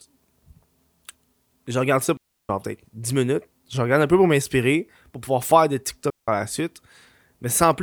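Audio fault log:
2.17–2.49 s and 6.10–6.28 s, digital wireless dropout: the speech just drops into near silence twice, first for about 325 ms and then for about 180 ms, with no crackle or noise burst on either side. That clean hole is the giveaway. The wireless receiver lost too much of the data stream to rebuild the audio, so it muted with a very quick fade and came back once the link recovered.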